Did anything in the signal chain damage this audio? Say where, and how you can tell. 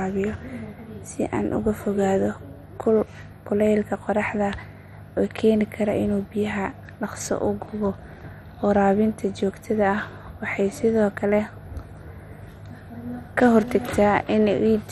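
Yes. The damage is at the codec, throughout the speech. Nothing remains above 14.1 kHz. The sound is dull, gurgling and granular. Upper sub-bands drop out and the rest are coarsely quantised. This is likely heavy MP2 compression, consistent with about 56 kbps.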